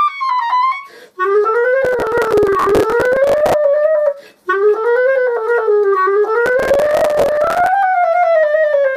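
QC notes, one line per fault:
1.85–3.54 s, processor overload crackle: dozens of missed deadlines in a row replay stale audio in short blocks of around 5 ms, heard as gritty tearing rather than a single dropout.
6.46–7.69 s, processor overload crackle: another dense run of hard-edged repeated fragments, roughly 5 ms each, crackling over the sound and stopping cleanly once the load eases, unlike steady clipping distortion.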